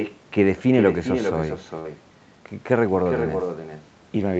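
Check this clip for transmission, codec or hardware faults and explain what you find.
Two faults are present in the speech: an uncancelled echo running through the whole recording, and one short burst of packet loss. The audio is band-limited to 8 kHz, as expected for an Opus call path at around 64 kbps.

Echo with no canceller, throughout: every phrase is followed by a second copy, about 6 dB quieter and roughly 400 ms late. The far end's loudspeaker output is picked up by its own microphone and sent back over the network, and no echo canceller removes it. The returning copy sounds thinner than the direct speech.

Burst of packet loss, 1.79 to 1.89 s: for about 50 ms the receiver extends the last decoded sound and fades it down, so the speech turns briefly into a held, dimming buzz or hiss. After that, roughly 40 ms of real audio never arrives, and playback resumes further along. The result is a short audible skip, with the speech jumping forward.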